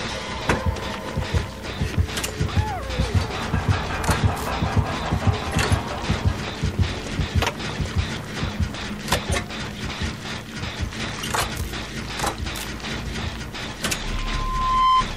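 Throughout the clip, the signal has likely been reduced to very few bits by truncation without dither, which fits an 8-bit path. Because nothing randomises the rounding, the error tracks the audio itself, leaving a grainy distortion that sits around 30 dB below the signal and changes character with it. Quieter passages turn gritty and rough, and the faintest moments sputter between steps or collapse into silence.

At 5.51 s, compressed frames are skipped: the decoder never plays a short run of encoded frames, either because they are missing or because they were rejected as damaged. The audio jumps ahead by roughly 70 ms, which fits about three 24 ms frames.

From 14.04 s to 15.05 s, a loudspeaker feedback squeal appears. A microphone is picking up the loudspeaker it feeds, and at 1 kHz the loop gain exceeds one. That tone builds on itself over roughly 0.7 s and swells into a piercing whistle about 10 dB above the rest of the sound. 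It dominates until it stops just before the clip ends.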